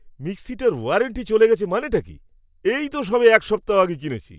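No technical faults occur at any point in the recording.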